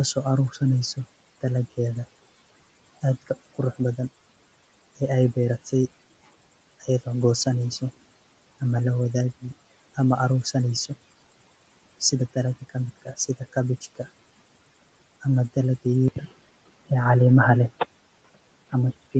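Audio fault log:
12.96–13.55 s, speech cut by the noise suppressor: the suppressor mistook bits of speech for noise and pulled them down about 18 dB, roughly a tenth of a second swallowed.
16.08 s to the end, input switched to a poorer device: after an 80 ms gap, the sound narrows and turns dull, the level shifts by around 5 dB, and new background noise sits about 30 dB down. That's likely a jump to a narrower-band microphone.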